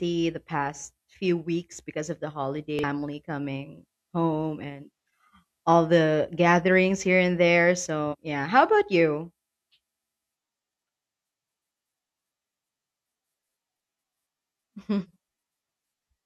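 Damaged data in the compressed speech stream makes the decoder misread frames, lose sync and hunt for the next valid header, producing short chirps or blips. The first, from 2.79 to 2.84 s, falls after "weeks because of the" and before "coming home and". The second runs from 8.08 to 8.15 s, between "gatherings here and there" and "yeah how about you". The third spans 15.00 to 15.07 s.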